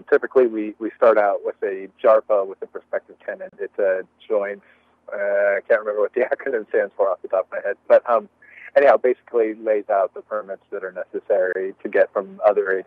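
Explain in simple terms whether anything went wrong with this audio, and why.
Two brief silences cut in, at 3.49 s (about 33 ms) and 11.53 s (about 25 ms): a gap between stream segments. The player stitched 4-second chunks with slightly mismatched timing and filled each gap with silence. Unlike a dropout, nothing is missing; the sound resumes exactly where it stopped.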